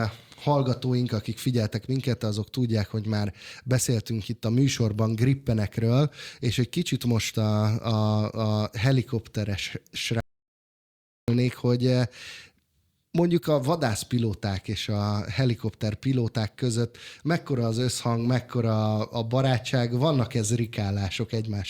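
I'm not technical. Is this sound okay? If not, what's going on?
No. The audio input was likely lost for a moment, perhaps a loose connection or accidental mute, so the recording captured nothing. This is an audio dropout to silence: from 10.20 to 11.28 s the speech cuts to dead silence, about a second gone, returning at "hogy eh".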